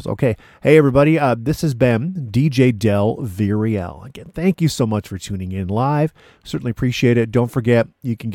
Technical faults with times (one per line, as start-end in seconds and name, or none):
none